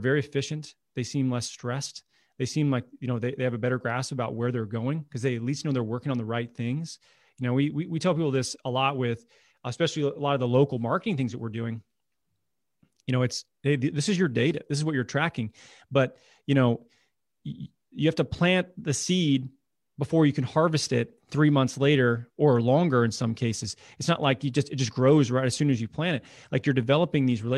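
The speech recording shows no technical faults anywhere in its duration.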